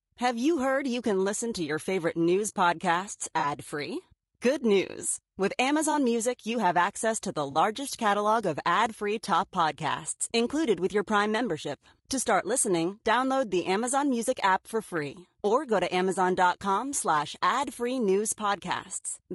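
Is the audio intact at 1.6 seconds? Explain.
No, at 1.6 s the speech is rough and grainy throughout, likely from low-delay AAC compression whose short frames blur harmonics; spectrogram shows smeared harmonics, noise between them, and a thinned top band.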